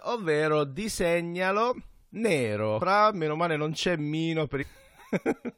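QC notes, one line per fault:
2.80 s, damaged data in a compressed stream: corrupted frame bytes make the decoder misread or drop audio and resync, heard as a brief disruption; a narrow vertical stripe or gap in the spectrogram.
4.61–4.63 s, damaged data in a compressed stream: about 23 ms of speech broken as the decoder loses frame sync, seen as a short discontinuity in the waveform and spectrogram.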